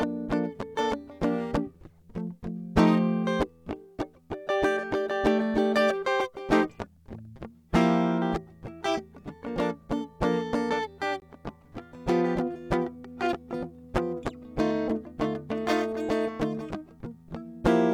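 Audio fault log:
11.2 s, gap at a join of encoded pieces: two separately encoded sections of the music were joined without trimming, so the silent start-up delay one encoder run adds and the padding of the other's last frame both remain at the seam. This drops a silence of about 20 ms into the continuous music, its edges softened by the codec's smearing, and the music then resumes exactly where it stopped, with nothing lost.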